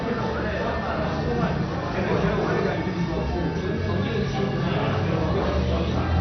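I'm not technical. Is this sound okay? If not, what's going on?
No. The audio was likely squeezed too hard by MP2 compression, which divides sound into slices and switches off the upper ones when space runs short. From start to finish nothing above about 6.2 kHz remains, so it sounds dull, with a gurgling, grainy roughness.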